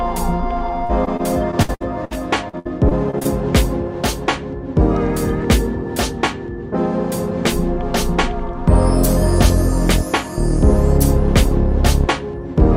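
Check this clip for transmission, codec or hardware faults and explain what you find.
Two bursts of repeated packet loss (robotic sound), from 0.85 to 2.13 s and 2.49 to 3.27 s. Packets kept arriving lost or late, and the receiver covered each hole, up to about 60 ms long, by extending the preceding sound. Roughly a fifth of each stretch is patched, so the audio turns choppy.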